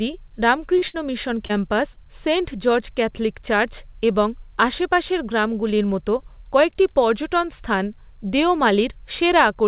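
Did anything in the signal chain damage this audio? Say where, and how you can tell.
Yes. Short concealed packet loss occurs at 0.78 to 0.84 s, 1.46 to 1.51 s and 1.93 to 1.98 s, a network-stage fault. Each time about 40 ms of audio arrived too late, and the receiver bridged it by extending the preceding sound, leaving a brief smear or wobble.

A burst of packet loss, also at the network stage, follows at 0.88 to 0.96 s. About 60 ms went missing in a run, and the decoder carried the last sound forward while fading it, giving a held buzz or dying hiss before the speech resumes further on. The band stopping at 4 kHz reflects the narrowband telephone codec on this call path.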